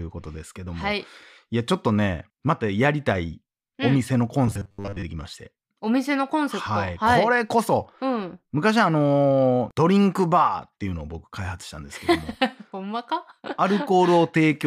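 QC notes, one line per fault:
4.48 to 5.05 s, robotic sound from repeated short buffers: the speech collapses into a rigid metallic buzz at a fixed 100 Hz, most likely because a roughly 10 ms segment is looped in place of most of the incoming audio, which imposes that fixed pitch.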